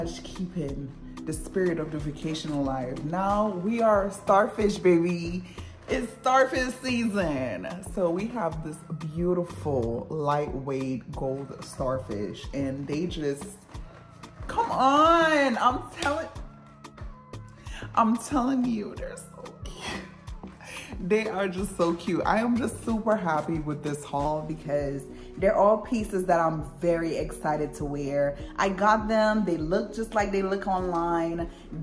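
From 0 to 24.25 s there is a wrong sample rate fault. The samples play back too slowly without conversion, at 0.919 times speed. Pitch drops by about 1.5 semitones, so the sound is lower and slower. This fits 24 kHz material played at 22 kHz.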